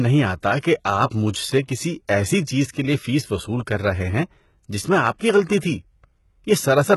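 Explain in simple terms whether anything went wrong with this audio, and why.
From start to finish the speech sounds gritty and metallic in its treble, and s sounds come out lispy, with nothing above 11.8 kHz. The likely cause is heavy HE-AAC compression, which guesses the highs by copying lower sounds upward instead of keeping the real ones.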